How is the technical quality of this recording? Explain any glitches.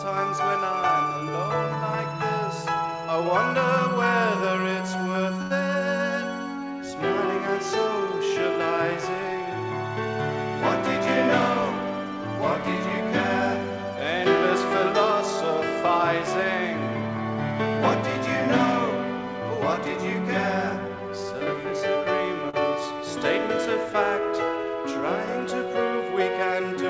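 The recording passed through a call path and shows three network glitches, two short stalls and one speed-up; nothing is heard above 8 kHz, consistent with a wideband call codec.

Short stall from a late packet, at 5.42–5.53 s and 22.49–22.61 s: a packet arrived late, so the jitter buffer ran empty and the last sound was stretched, holding it for 86 ms and then 41 ms before resuming with nothing lost.

Jitter buffer speed-up, at 19.19–19.95 s: the buffer had grown past its target, so the receiver trimmed around 40 ms in small pitch-period pieces. The audio runs at 105% speed, sounding hurried at unchanged pitch.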